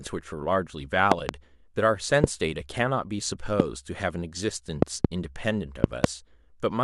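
Sharp loud pops jump far above the speech: a double pop at 1.12–1.31 s, single pops at 2.24–2.26 s and 3.60–3.62 s, then double pops at 4.82–5.07 s and 5.84–6.06 s, each likely a sudden voltage spike from a plug, switch or static discharge.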